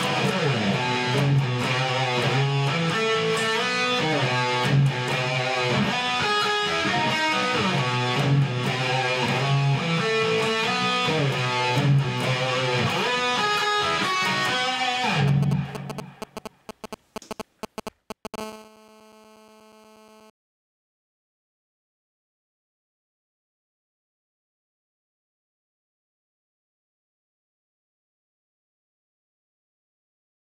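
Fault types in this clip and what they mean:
GSM signalling bursts: a nearby 2G phone exchanging signalling sends short radio-burst groups the audio circuit rectifies, giving a galloping dit-dit-dit of short 217 Hz buzzes, only a few dB below the sound.
GSM phone buzz: the phone then transmits continuously in call mode, pulsing 217 times a second, and the rectified bursts become a steady, raspy 217 Hz buzz about 20 dB down.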